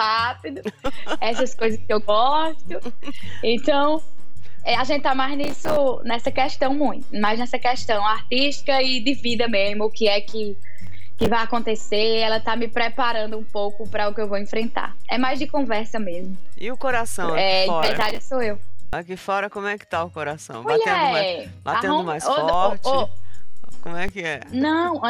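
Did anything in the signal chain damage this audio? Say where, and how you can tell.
Yes. A DC step sits at the converter or analogue input stage. The zero line jumps at 0.86 s and returns at 18.93 s, then shifts again from 22.54 s to 24.09 s. Each jump is a low thump, and the sound carries on unchanged across it.

Processor overload crackle comes from the driver or buffer stage, at 5.44–5.77 s, 10.82–11.27 s and 17.83–18.23 s. Each burst is gritty tearing where dozens of short buffers, around 3 ms each, missed their deadline and replayed stale audio with hard edges.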